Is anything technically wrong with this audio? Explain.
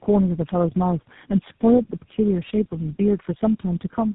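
Yes. Throughout the speech there is tandem speech coding: the call was decoded and re-encoded at each network border, so every codec stage worked on the previous one's degraded output. The damage stacks, leaving the speech rough, muffled and warbly, more so than any single codec would. Nothing comes through above 3.8 kHz. The character points to about four speech codecs in series, with the last one sounding like GSM full rate.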